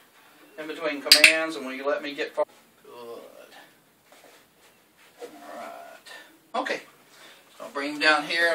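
At 2.42 to 2.44 s the audio jumps abruptly ahead with a brief blip, a stream segment skipped, likely because one segment failed to load and playback resumed at the next.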